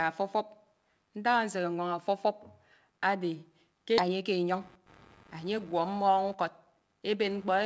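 Computer activity noise runs through the whole of this speech recording: a faint buzz pulsing at roughly 100 Hz, sitting about 30 dB below the speech. It tracks the computer's workload rather than the talker, because load swings in the processor, graphics card or mouse disturb the ground that the audio circuitry shares, and those current changes leak into the signal as buzzing that jumps up and drops back with that activity. A skip ahead occurs between 3.98 and 4.00 s. Playback jumps forward with no filler, and around a second of speech simply vanishes. The material before and after the cut is butted together almost seamlessly. This happens when a block of audio is discarded, either in transit or by an overfull jitter buffer, while newer audio is already queued, so the receiver carries on from the later point. Jitter buffer speed-up follows from 4.08 to 4.6 s and again from 5.24 to 7.6 s. 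Both stretches play at 108% speed with unchanged pitch, shaving off roughly 50 ms and then about 200 ms, which gives the delivery a hurried feel. The buffer was holding more audio than it targets, so the receiver trimmed repeated short slices of one or a few pitch periods to pull the delay back down. The G.722 call path at 64 kbps leaves nothing above 8 kHz.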